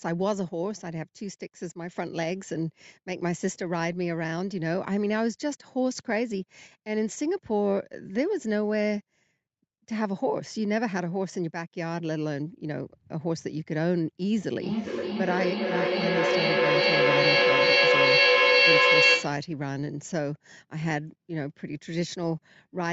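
From 14.58 to 19.56 s, feedback echo between two devices recaptures the speech, which returns roughly every 400 ms and builds to about 7 dB above it.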